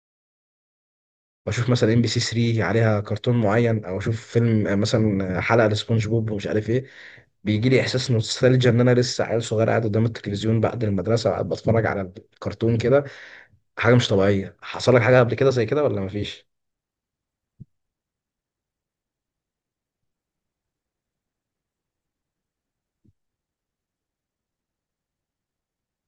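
No technical faults turn up anywhere in the time order of this speech clip.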